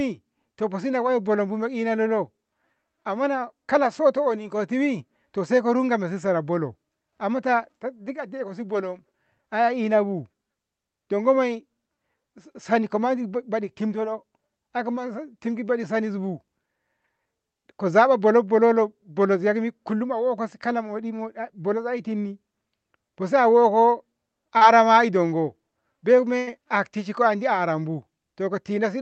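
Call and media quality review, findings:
Short concealed packet loss, 24.57–24.63 s, just before "ndongo bei": brief smear or wobble in the speech. About 40 ms of audio missing. Receiver-side concealment extended the preceding sound for about 35 ms, then crossfaded back. Probable component: Opus decoder packet-loss concealment.

Burst of packet loss, 26.39–26.49 s, between "ndongo bei" and "haktishenko andi": held, fading tail, then an audible skip. About 80 ms lost, all of it concealed by attenuated extrapolation of the last sound. Probable component: jitter buffer and decoder concealment. Band-limited to 8 kHz, consistent with an Opus call path.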